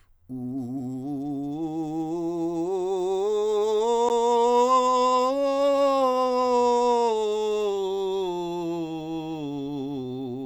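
A music clip with one CD skip at about 4.09 s. You get a quick tick and a hair of silence, roughly 15 ms, and then the music picks up from a different point rather than where it left off. That's the laser getting knocked or tripping over a flaw and landing on another turn of the spiral, so the player briefly mutes and carries on from the new spot.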